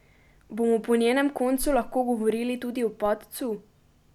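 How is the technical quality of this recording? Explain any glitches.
The recording has one glitch, a DC step at 3.06 s, right after "lahko govorili tudi o". The waveform's zero line jumps by about -33 dBFS, as when an offset input is switched in, then drifts back as a 5 Hz high-pass bleeds it away. It sounds like a brief low thump under the continuing speech. A waveform shows a sudden baseline shift easing back, and a spectrogram shows a short broadband click with low-frequency energy.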